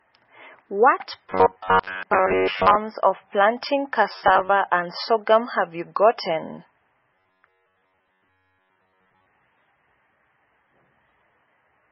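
Speech recorded through MP3 compression, likely at a very low bitrate (the heavy damage fits something near 16 kbps), shows a hard treble cut with nothing above 5.6 kHz, leaving dull, watery, swirling speech with smeared attacks throughout. Delayed audio delivery, likely with the same stretch of roughly 10.7 ms repeated to fill the gaps, produces robotic sound from repeated short buffers from 1.30 to 2.75 s, 4.12 to 4.50 s and 7.16 to 9.26 s. Most of each stretch is repeats, pressing a rigid metallic buzz at 93.8 Hz onto the voice.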